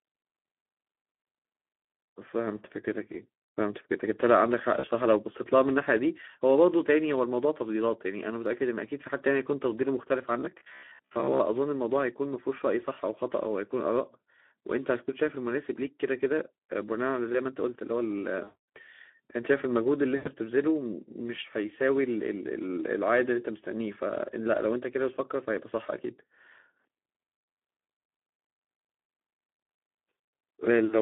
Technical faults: Speex codec; VoIP packet loss concealed by the speech codec; robotic sound from repeated short buffers

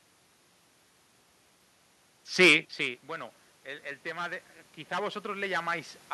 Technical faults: automatic gain rising

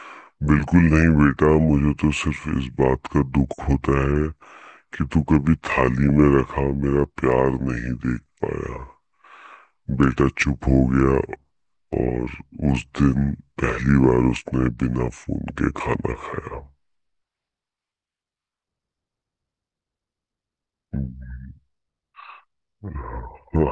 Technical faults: wrong sample rate

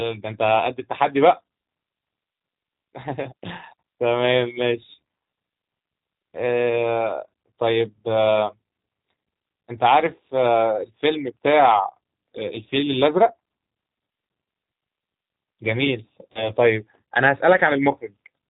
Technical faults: G.729 codec; VoIP packet loss concealed by the speech codec

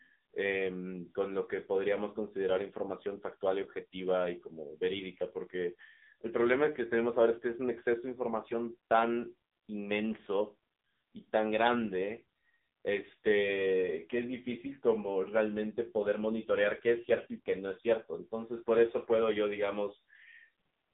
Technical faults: AMR narrowband mobile codec

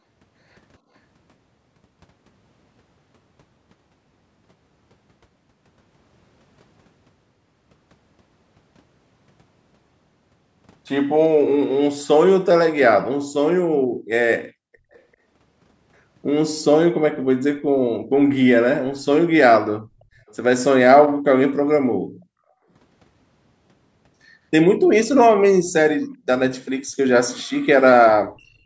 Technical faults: background gated by the echo canceller; echo leak

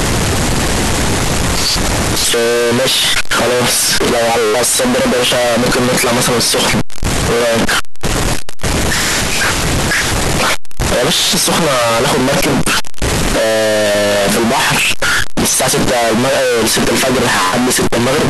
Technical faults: float read as integer

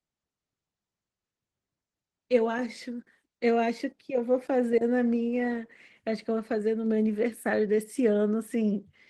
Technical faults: Opus voice compression

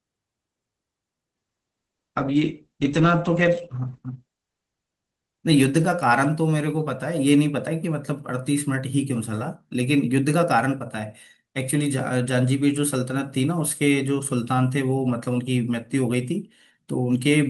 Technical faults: call bitrate drop

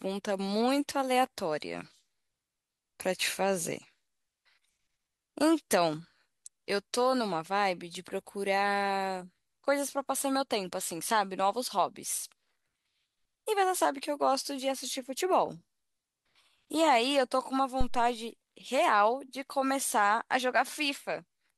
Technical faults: phantom power thump

